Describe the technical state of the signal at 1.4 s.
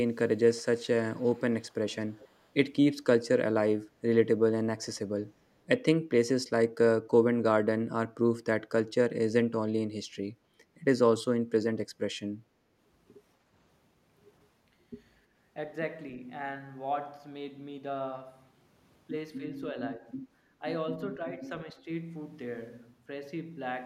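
At 1.4 s the signal carries an echo leak, heard from 1.12 to 1.41 s: a faint, delayed copy of the speech trailing the original by about 279 ms, sitting far below the main level. The likely cause is a far-end loudspeaker feeding its microphone, with the echo canceller letting a residue slip back down the line. Unlike room reverberation, which smears into a smooth decay, this returns as a distinct, separated repeat.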